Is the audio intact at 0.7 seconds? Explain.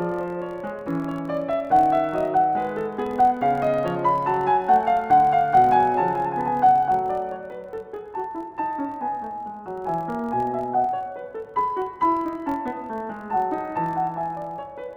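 No, a buzz near 43.1 Hz runs under the music throughout, filter restarted on every block: each block, which fits 1024 samples, starts from silence and ticks.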